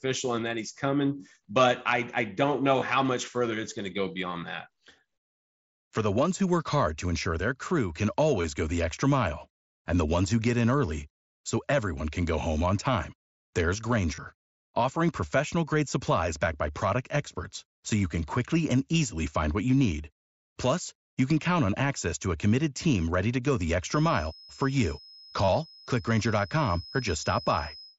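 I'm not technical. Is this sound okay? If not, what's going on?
No. There are two problems. First, concealed Bluetooth headset packet loss: bits of audio travelling from the headset to the phone went missing, and the phone filled each gap by repeating the last few milliseconds. Each gap is brief: 2.8 s, 8.42–8.44 s, 14.15–14.18 s, 21.71 s and 25.45–25.48 s. The longer ones can sound like a quick buzz or wobble.

Second, a feedback whistle: a faint, steady high-pitched tone around 5.1 kHz sits well below the speech from 23.8 s to the end, swelling and fading slowly. It is likely caused by the loudspeaker's sound leaking back into the microphone.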